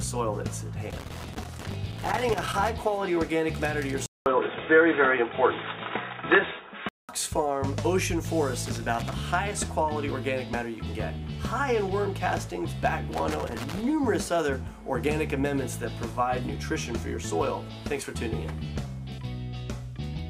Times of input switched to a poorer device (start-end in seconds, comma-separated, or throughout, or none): 4.06-7.09